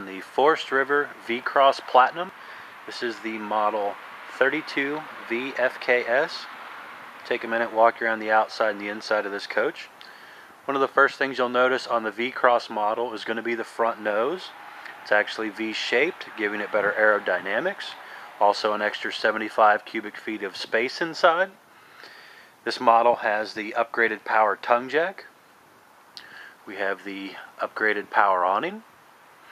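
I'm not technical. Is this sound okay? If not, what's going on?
Yes, it's fine; nothing here sounds broken or glitchy, so there's nothing to worry about.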